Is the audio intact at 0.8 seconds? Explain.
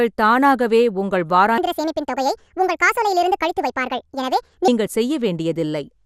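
No. At 0.8 seconds, as throughout the clip, the speech carries MP2 compression damage, likely from low-rate MPEG Layer II coding that fits roughly 80 kbps. Starved sub-bands drop out and the rest are coarsely quantised, giving a dull, gurgling, granular sound. A spectrogram shows nothing above 15.8 kHz and upper bands flickering on and off.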